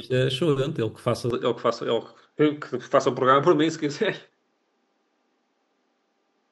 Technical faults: input switched to a poorer device

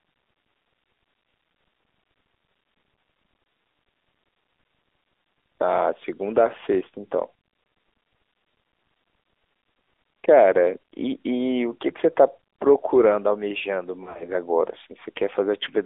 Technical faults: AMR narrowband mobile codec; lost AMR speech frames

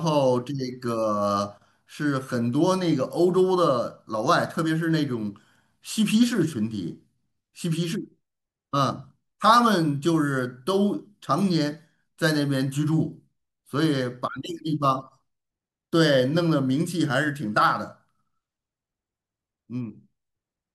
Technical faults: none

